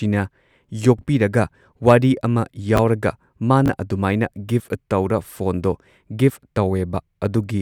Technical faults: chunks out of order

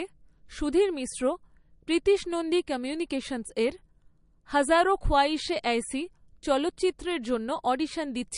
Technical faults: MP3 compression

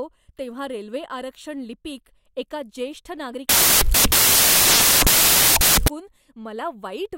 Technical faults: samples built from the wrong bytes

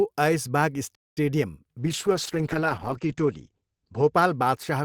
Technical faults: playback stall; call bitrate drop

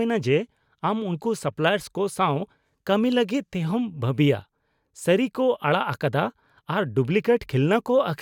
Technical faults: none

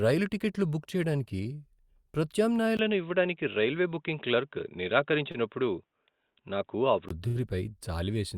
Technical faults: input switched to a poorer device; short stall from a late packet

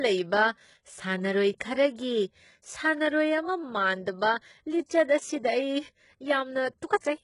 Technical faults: HE-AAC compression

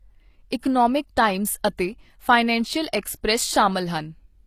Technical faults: HE-AAC compression

